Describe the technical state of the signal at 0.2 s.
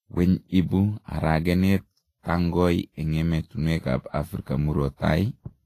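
At 0.2 s the speech carries Vorbis compression damage, present throughout: grainy, hissy treble with nothing above 14.2 kHz, likely from a low-bitrate encode around 30 kbps.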